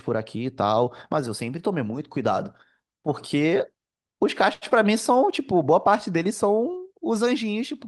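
At 4.53 s a packet arrived late and the jitter buffer ran dry, producing a short stall from a late packet. The receiver held the last speech sound for about 82 ms until the packet turned up at 4.64 s, then resumed from the same point, so nothing is lost. The sound is drawn out unnaturally, with a faint buzzy or slightly sagging quality, and everything afterwards runs about 82 ms behind where it would have been.

Just after, from 4.70 to 4.73 s, about 20 ms of audio never reached the decoder in time, a short concealed packet loss. The receiver patched the gap with roughly 12 ms of synthesised continuation, extending the preceding sound's pitch or its noise shape, before blending back into real audio. It comes across as a quick smear or wobble. Because the patch is shorter than what went missing, a little of the speech is skipped there.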